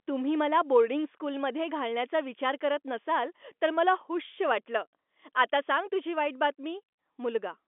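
Speech carried over G.711 telephone coding, with the line band running from 250 Hz to 3.5 kHz and nothing above 3.7 kHz; no technical fault present.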